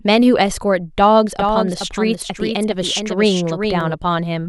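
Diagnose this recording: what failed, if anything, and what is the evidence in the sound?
Likely a second, slower capture path: a dry doubled audio track trails roughly 0.4 s behind, about 5 dB down, starting and stopping abruptly at 1.39 and 3.94 s.

The buffer stage handles 2 s overlapping chunks, so 6.5 ms replays at each join, heard as brief stutter-clicks at 1.80 s and 3.81 s.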